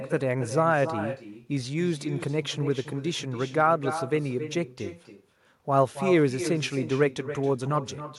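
Throughout the recording there is echo with no canceller: the far end is playing the call over a loudspeaker, its microphone is catching that playback, and no echo cancellation strips it out before it is sent back. The result is that every phrase of speech returns after roughly a third of a second, about 11 dB below the original, as a fainter, thinner copy trailing the talker through the whole clip.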